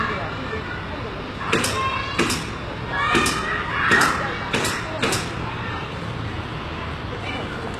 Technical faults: HE-AAC compression

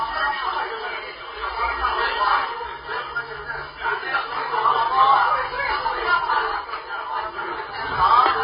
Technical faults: AAC compression

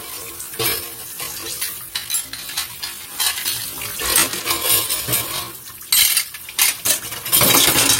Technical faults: time-stretched section

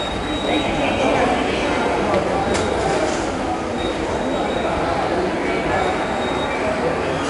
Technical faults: 4-bit ADPCM compression

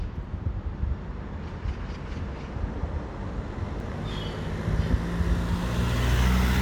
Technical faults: damaged data in a compressed stream

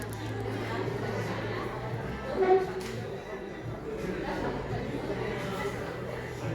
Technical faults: none

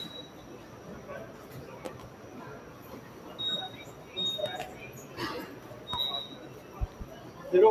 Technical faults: noise suppressor applied to music or sounds; loud pop

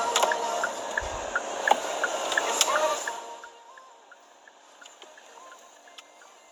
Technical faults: none

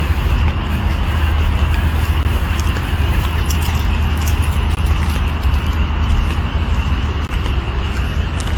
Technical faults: generation loss; gap between chunks

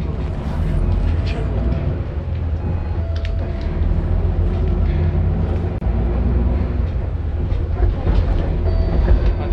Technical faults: gap at a join of encoded pieces

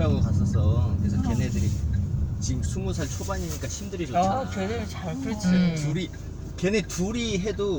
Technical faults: none

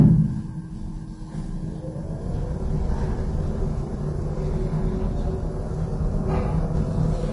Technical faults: Vorbis compression

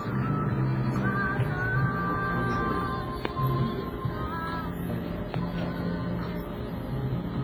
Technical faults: WMA compression; loud pop

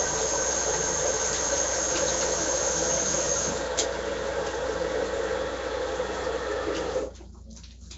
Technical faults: Nellymoser compression

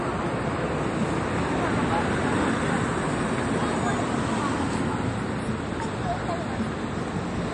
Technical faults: MP3 compression

